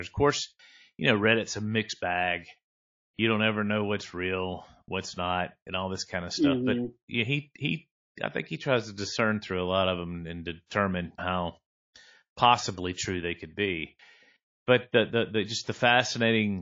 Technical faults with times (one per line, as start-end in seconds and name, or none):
0.00-16.62 MP3 compression
3.14-3.19 pre-echo
10.66-10.71 pre-echo